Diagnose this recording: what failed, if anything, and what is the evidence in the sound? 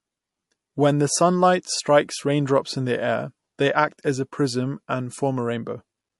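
The failure sits at the codec stage, and the damage is plainly audible throughout the speech. The sound is watery and swirly, with a dulled top end. S sounds turn metallic and chirpy, and consonant attacks smear. This is likely MP3 compression at a low bitrate, around what a 48 kbps encode gives. Starved of bits, the encoder cuts the treble and zeroes weak frequency lines. Those lines flicker on and off between frames, which produces the swirl.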